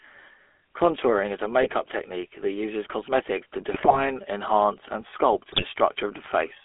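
Throughout, the speech carries the buzzy, gravelly texture of the GSM full-rate codec. The band is held to about 250 Hz to 3.4 kHz, which fits a 13 kbps coder driving a vocal-tract model with sparse, regularly spaced pulses. The damage is plainly audible.

GSM bit errors break in three times. At 1.62 to 1.72 s, after "is a", at 3.71 to 4.02 s, between "uses cosmetics to" and "enhance and", and at 5.52 to 5.65 s, after "enhance and". Corrupted filter, pitch and gain values distort the spectrum and level, producing squawks, pops and gargling.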